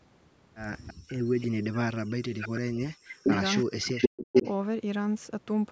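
From 0.87 to 1.47 s an echo leak brings back a delayed copy of the speech, 328 ms late and about 15 dB below the talker, likely residue from a loudspeaker that the far side's echo canceller failed to remove. Within it, from 0.94 to 1.09 s, the background is gated by the echo canceller. The room sound drops by about 40 dB for roughly 150 ms while the canceller clamps the microphone, then returns.

From 1.50 to 3.29 s the speech is suppressed in double talk. Both sides were talking, and the canceller likely could not separate the near talker from the echo, so it pulled the voice down by as much as about 40 dB across roughly 1.5 s.

The echo leak recurs with a 434 ms delay. From 2.40 to 2.60 s it sits about 10 dB under the speech, from 3.10 to 3.63 s at about the same level, and from 3.95 to 4.52 s about 5 dB above it.

A second double-talk suppression runs from 3.64 to 4.34 s. It cuts the speech by up to about 40 dB for roughly half a second, under the call microphone processing's 8 kHz bandwidth.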